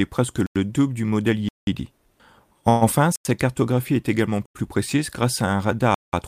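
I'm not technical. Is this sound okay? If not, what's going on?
No. There are blocks of digital silence at 0.46, 1.49, 3.16, 4.46 and 5.94 s: the speech cuts out abruptly for about 0.09 to 0.19 s.

Around 2.69 to 2.84 s there's a call audio freeze: the sound stretches into a brief buzz or hiss that fades. Delayed network packets are the likely cause, and then the speech carries on with nothing lost.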